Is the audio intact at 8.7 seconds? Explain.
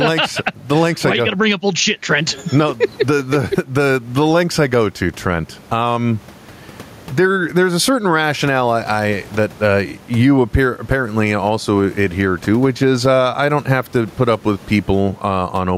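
No. Gain pumping runs through the whole clip, so 8.7 seconds is affected like every other moment. The likely cause is input gain set far too high, with a fast limiter or compressor clamping the level down whenever the speech gets loud. The room noise sits about 33 dB below the speech, and the gain swings by around 10 dB, leaving the speech squashed and flat in dynamics.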